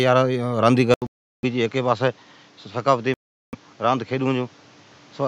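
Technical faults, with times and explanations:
0.94 s to the end, input switched to a poorer device: the recording most likely moved mid-stream onto a different, lower-grade input, such as another microphone or a headset running in call mode. An 80 ms silence marks the changeover. The speech then loses all content above 7.6 kHz and turns duller and boxier. It drops to about 5 dB quieter, and a new background noise sits roughly 30 dB below the voice.
1.07 to 1.45 s and 3.14 to 3.55 s, Bluetooth stall: interference most likely delayed the wireless audio packets, so the headphones' buffer emptied and playback halted until the resent data arrived. Each stall is heard as an abrupt hole in the speech, 366 ms in the first case and 391 ms in the second. The speech then resumes.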